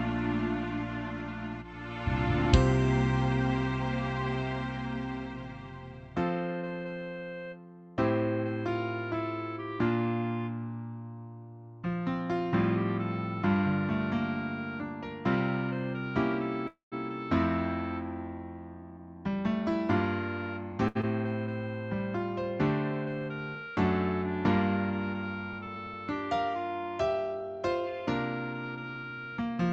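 From 16.67 to 16.94 s, the last sound trails off as a fading buzz into about 0.14 s of silence, then resumes where it stopped. This is a call audio freeze, likely from delayed packets draining the jitter buffer and inserting about 0.24 s.

From 18.75 to 20.73 s, the audio runs about 8% fast at unchanged pitch and sounds hurried. This jitter buffer speed-up trims pitch-period pieces, roughly 150 ms in all, to shed excess delay.

From 20.88 to 20.97 s, a sound is held about 74 ms too long with a slight buzz or dip. This is a short stall from a late packet: the buffer emptied and the receiver stretched the sound.

From 21.01 to 21.05 s, playback skips ahead, joining the two sides almost directly, with roughly a tenth of a second of audio gone.

From 25.53 to 25.94 s, the audio slows to about 90% speed and sounds drawn out. This jitter buffer slow-down repeats pitch periods, adding 48 ms to rebuild its reserve.

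From 27.27 to 29.57 s, another jitter buffer speed-up makes the audio about 6% faster, with roughly 150 ms removed.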